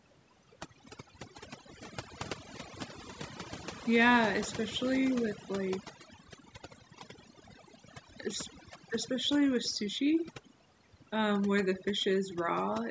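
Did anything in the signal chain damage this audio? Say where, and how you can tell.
Yes. Overdone noise removal, applied at the processing stage throughout the speech, leaves the background near-silent with twinkling specks. On a spectrogram, gaps between words show black with isolated bright dots, and quieter harmonics look patchy and chopped, because bands near the noise estimate are pushed far down or off. The call's normal band limit at 8 kHz is separate.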